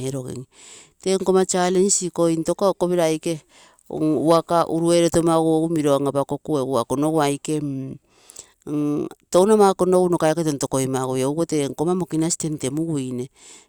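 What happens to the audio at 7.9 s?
At 7.9 s the speech carries on intact, with no fault to be heard at that moment.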